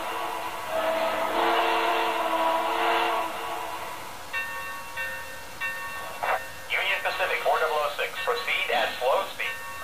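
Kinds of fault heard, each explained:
Low bit depth without dither: The whole clip carries a grainy, rough distortion that moves with the sound. It sits only about 20 dB below the signal. Quiet passages turn gritty, and the softest parts sputter between steps or drop to silence. The likely cause is the audio being truncated to very few bits with no dither, which fits a 5-bit signal.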